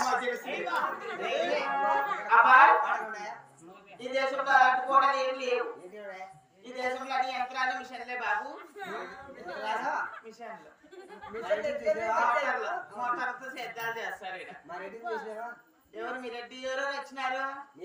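No technical faults can be heard anywhere in the audio.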